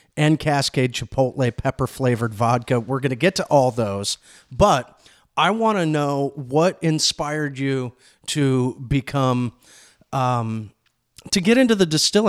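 Speech recording with no audible technical faults.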